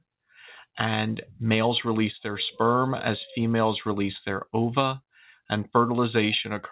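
No technical faults can be heard in the audio. It carries the narrow band of a telephone-grade call, with nothing above 4 kHz, which fits G.711 mu-law coding.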